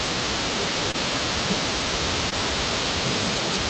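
Speech carried over a call path, with short concealed packet loss at 0.91 to 0.96 s and 2.30 to 2.34 s: about 20 ms went missing each time and the receiver bridged it by extending the preceding sound, giving a brief smear rather than the silent hole of a plain dropout.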